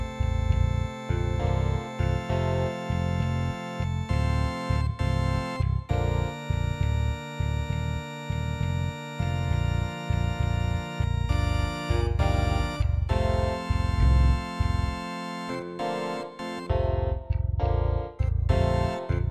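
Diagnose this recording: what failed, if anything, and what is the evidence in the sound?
A wrong sample rate fault at the playback stage. Throughout the clip, the sound runs at two-thirds speed and sits about 7 semitones low. Speed and pitch fall together by one ratio, which fits 48 kHz material clocked out at 32 kHz without conversion.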